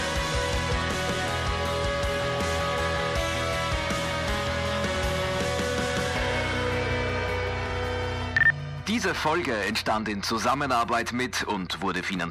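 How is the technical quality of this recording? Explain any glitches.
The recording has three short bursts of DAB burbling, at 0.69 to 0.91 s, 2.82 to 3.04 s and 11.51 to 11.73 s. Weak reception let bit errors slip past error correction into the MP2 data. Corrupted samples put short blips of noise in single sub-bands. Each burst fits about ten damaged frames and burbles over the audio.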